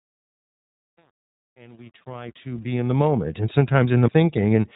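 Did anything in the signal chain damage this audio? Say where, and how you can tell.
Yes. At the codec stage, iLBC coding cuts everything above 3.8 kHz and codes each 30 ms frame independently, consistent with its 13.33 kbps mode, leaving the speech audibly rough and synthetic.

In sample-format conversion, the fade-in from 0 to 3.25 s was computed without dither at roughly 9-bit precision, causing truncation distortion: gritty steps, worst until 2.69 s.

At playback, a CD skip at 4.08 s briefly mutes the player before it resumes elsewhere on the spiral, heard as a tick and an abrupt jump.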